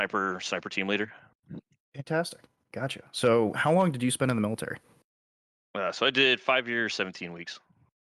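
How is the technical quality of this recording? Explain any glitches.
The technical quality of this recording is sound, with no glitches to explain.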